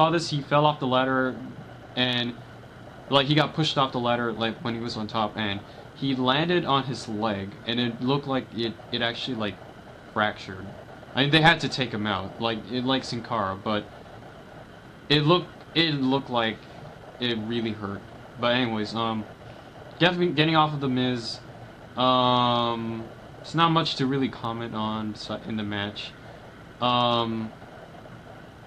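No technical faults can be heard anywhere in the audio.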